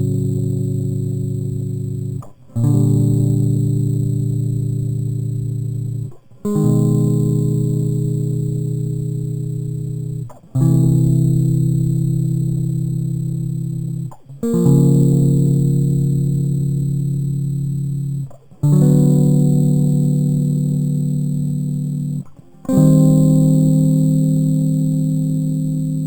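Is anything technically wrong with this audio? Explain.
Yes. Throughout the music there is imaging from sample-and-hold upsampling. Each sample was simply repeated, which points to 8 kHz material raised to 44.1 kHz, so mirrored spectra about 28 dB down fill 4 to 8 kHz as a metallic fizz.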